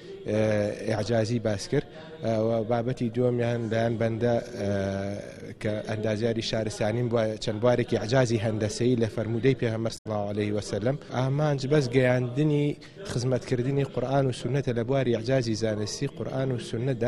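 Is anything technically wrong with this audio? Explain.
Yes, there is one fault: damaged data in a compressed stream, from 9.94 to 10.06 s. For about 0.12 s the decoder was fed bytes that had been lost, zeroed or overwritten, so it misread or rejected those frames, lost sync and hunted for the next valid frame header before resuming. The result is a brief chirp, click or short hole at that point.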